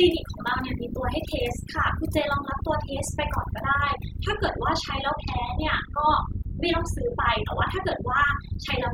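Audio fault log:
Throughout: overdone noise removal. Noise reduction was applied far too heavily to a noisy speech recording. Each frequency band that sits close to the estimated noise level gets pulled right down or muted. The quieter parts of the speech fall below that line and are cut along with the noise. So the background drops and breaks up into twinkling, warbling specks.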